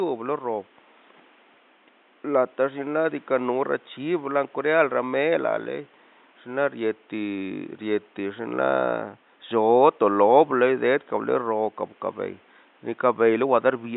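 No technical faults can be heard in this speech recording. The room's own background noise sits about 35 dB below the speech, a normal part of the recording.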